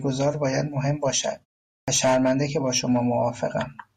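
At 1.84 s, after a pause of about 0.47 s, the speech has a clipped start after a pause. The output device had gone idle in the silence and took about 38 ms to wake, so the opening sound is lost and the next word begins abruptly. Unlike muted pauses, which only silence the background in pauses, this loses actual speech.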